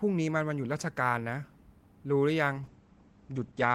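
Speech that hits a call bitrate drop at 2.58 s and stays there to the end. The encoder starved for bits, so it goes rough and muffled, with the top end cut off around 8 kHz. That fits a fall from roughly 32 to 11 kbps.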